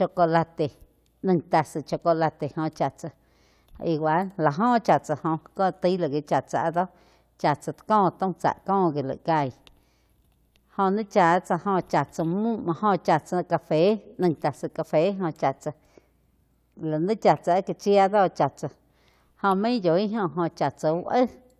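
A speech recording with nothing technically wrong in it, so there are no times or causes to report.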